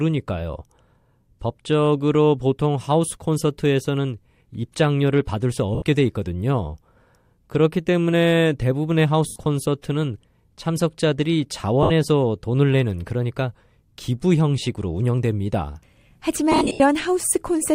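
At 5.75, 9.28, 11.83 and 16.52 s, lost LE Audio frames are concealed with a reused, sign-scrambled spectrum. The result is a brief noisy smear that shows as blurred, structureless spectrogram patches.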